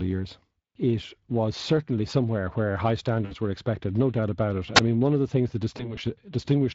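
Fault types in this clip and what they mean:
Speex codec: a low-bitrate CELP speech codec, consistent with roughly 20 kbps here; throughout, the speech sounds plainly noisy and hoarse.
VoIP packet loss concealed by the speech codec: the decoder stretches the last sound into a fading extrapolation over 60 ms at 3.25 to 3.35 s, and through two scattered 20 ms gaps between 5.77 and 5.99 s.
Wireless microphone squelch dropout: the radio link fades and the receiver mutes briefly, heard at 4.75 s as a hiss rise and a roughly 2 ms hole before the speech returns.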